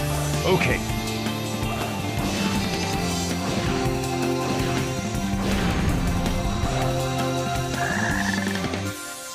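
Nothing is technically wrong with the clip; no faults can be heard at any point in it.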